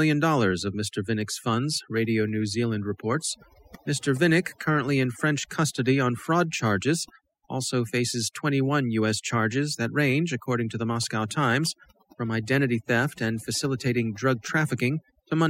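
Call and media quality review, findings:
Overdone noise removal, throughout. Noise suppressor set too aggressive: bands near its noise estimate pulled far down or gated, taking quiet speech detail too. Background drops, breaks into twinkling specks. Probable component: denoise stage.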